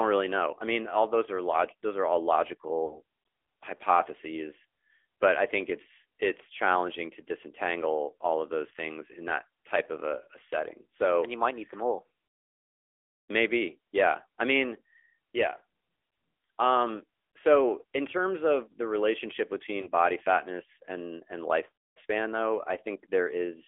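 The whole clip runs through the AMR narrowband mobile codec. The speech is squeezed into roughly 300 Hz to 3.5 kHz, with a plainly buzzy, synthetic edge that points to one of the mid-range AMR-NB modes, around 10.2 kbps. Nothing above 4 kHz survives.

At 2.86 to 3.01 s there are lost AMR speech frames. About 40 ms went missing, which fits two 20 ms frames failing, so the decoder stretches the last good pitch and vocal tract shape with fading gain. You hear a brief smeared warble and dip. It happens again at 19.82 to 19.89 s, this time a single 20 ms frame, heard as a shorter blip.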